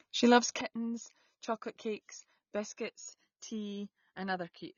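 From the first moment the speech carries the marks of AAC compression. Everything above 6.9 kHz is missing, so sibilants sound dull and clipped, and sustained vowels take on a warbling, smeared texture where the coder has thinned the spectrum. On a spectrogram this shows as a hard horizontal ceiling at 6.9 kHz with patchy gaps and flickering blocks below it. The damage is plainly audible and points to a low AAC-LC bitrate, likely around 24 kbps.

At 0.61 s there is a sudden gain jump: the level falls by about 14 dB in a single step and stays down until the end of the clip. Speech and background noise drop together with no fade, which suggests a gain change applied between one sample and the next, without a ramp. On the waveform the envelope narrows abruptly at that point to roughly a fifth of its earlier height, with a sharp vertical edge where the change lands, and the spectrogram dims uniformly across all frequencies from there on.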